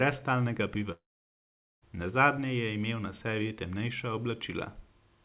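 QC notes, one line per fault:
0.92–1.84 s, long network dropout: the stream most likely lost its incoming packets for about 0.9 s, and the receiver bridged the gap itself. The last sound before the break carries on briefly as a decaying buzz, then gives way to roughly 0.8 s of near-silence before the audio resumes with that stretch simply gone. The surrounding call-path sound, band-limited to 4 kHz in a way that fits G.711 narrowband coding, returns unchanged.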